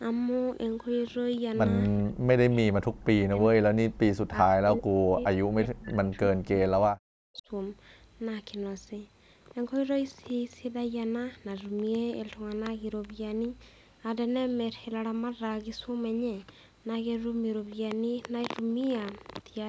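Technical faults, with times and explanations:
1.98–3.76 s and 4.29–7.48 s, speech suppressed in double talk: the voice repeatedly sinks by roughly 40 dB or drops out, for about 1.5 s and then about 3 s in total. This is likely an echo canceller muting the near talker during overlapping speech. On the waveform, the envelope collapses in chunks, and the spectrogram shows gapped, thinned harmonics.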